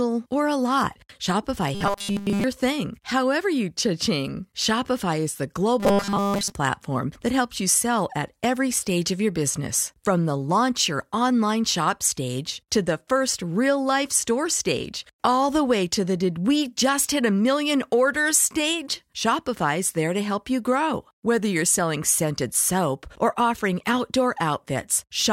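From 1.75 to 2.44 s, and again from 5.80 to 6.52 s, the speech collapses into a rigid, metallic buzz pitched at 200 Hz, following the original speech only roughly. The first span, ending just before "thing however you", is almost entirely buzz; the second, before "platform that helps you", is mostly buzz. This robotic sound from repeated short buffers likely comes from a tiny block, around 5 ms, being replayed while fresh audio fails to arrive.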